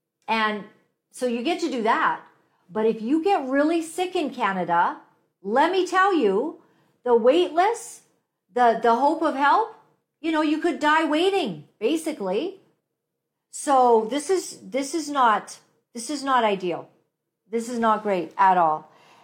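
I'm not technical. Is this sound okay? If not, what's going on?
Yes, no faults to report.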